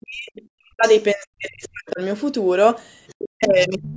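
The speech dips hard from 0.0 to 0.34 s, 0.57 to 0.85 s and 1.14 to 2.01 s, and again from 3.16 s to the end, falling by roughly 40 dB at its deepest. This is speech suppressed in double talk, likely an echo canceller ducking everything while both sides spoke. On the waveform the envelope collapses, and the spectrogram shows near-empty gaps. The other side's voice leaking through appears at 1.64 s, 3.07 to 3.14 s and 3.43 to 3.66 s. It is faint, about 20 to 35 dB below the speech, probably echo left behind after cancellation. It shows as faint traces in the spectrogram.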